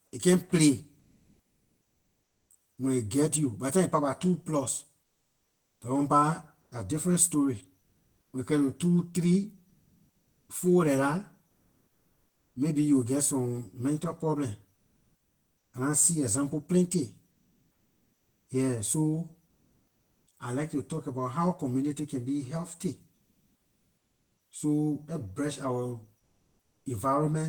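Throughout the speech, channel delay (comb filtering) is present. One channel lags the other by around 10 ms, and summing them to mono cancels energy near 50 Hz and then roughly every 100 Hz above it. The result sounds hollow and phasey, and a spectrogram shows fixed, evenly spaced horizontal notch stripes.

Comfort noise in place of the background appears in the pauses at 0.99–2.49, 5.03–8.33, 9.69–12.55, 14.75–15.73, 17.31–20.27, 23.15–24.37 and 26.19–26.85 s. The cause is likely Opus discontinuous transmission. For about 0.7 to 2 s at a time, the real background, roughly 50 dB below the loudest speech, becomes smooth, featureless hiss whose level shifts by about 3 to 5 dB. On a spectrogram these stretches show as flat, textureless bands.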